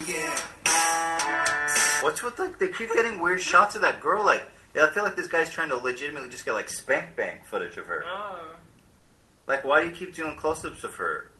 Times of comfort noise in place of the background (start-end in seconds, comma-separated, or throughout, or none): 9.01-9.37